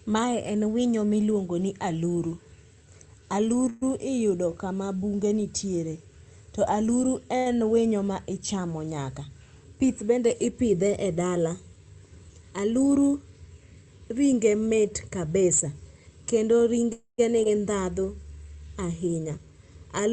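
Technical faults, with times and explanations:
3.69–3.84 s and 16.93–17.20 s, call audio freeze: Packets were likely held up in transit, so the jitter buffer ran dry and the receiver had to invent sound. At 3.69 s it fills about 120 ms by extending the last sound as a fading buzz just before "iyudo kama bunge nitiere". At 16.93 s the wait runs about 260 ms, and roughly half of that decays to silence. Afterwards the audio resumes where it stopped, so the stream is delayed but nothing is lost.
7.38–7.48 s, short stall from a late packet: One packet missed its playout slot, and the receiver covered the gap by stretching the sound it already had for about 80 ms. When the packet arrived, playback continued from the same point. The effect is a briefly held, slightly buzzy sound between "bunge nitiere to aluru" and "en winyo ma ichamo", with nothing missing.
12.15–12.52 s, 16.34–16.83 s and 19.12–19.53 s, jitter buffer speed-up: The buffer had built up more delay than its target, so the receiver trimmed it by cutting many short pitch-period slices in quick succession. 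Pitch stays the same, but the rhythm speeds up, to 118% in the first stretch (roughly 70 ms removed) and to 110% and 112% in the other two (around 50 ms each). These passages sound briefly rushed.
15.52–15.60 s, hard clipping: A peak drove some stage of the chain about 5 dB past what it could pass, so the waveform tops were sliced flat. The flattened peaks add high harmonics that were not in the original sound, which comes through as a short, harsh crackle on that loud moment.
17.44–17.47 s, skip ahead: Later audio was already queued when roughly 70 ms was dropped. The sounds on either side of the cut are joined almost directly with only a tiny fill. The result is an abrupt jump forward in which part of a sound is missing, right after the long freeze.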